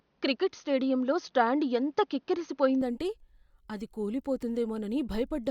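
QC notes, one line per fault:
0.00–2.82 s, input switched to a poorer device: the speech starts dull and boxy, with nothing above 6.5 kHz and faint background noise sitting well under the speech. At 2.82 s it opens up with no gap, and the level shifts by a few dB. That sudden change in bandwidth, tone and noise floor points to the system likely capturing from a narrower, noisier input, such as a headset's call profile, before switching back.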